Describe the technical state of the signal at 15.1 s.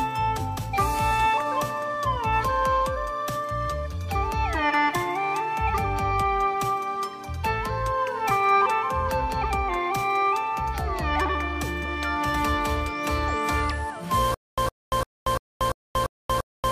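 A short 110 ms burst keeps repeating every 344 ms with 233 ms of digital silence between, a stutter with silent gaps running from 14.34 s to the end. The likely cause is a stalled stream replaying its last fragment and then running dry.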